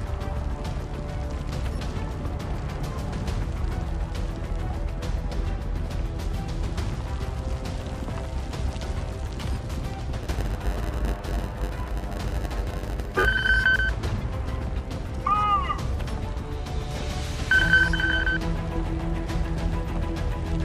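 From 10.19 to 13.25 s a block size mismatch (padded) inserts a zero-filled gap into every block, giving a 91.9 Hz buzz while the sound runs at 0.919 speed. Unlike a sample-rate mismatch, the slowdown leaves pitch essentially unchanged.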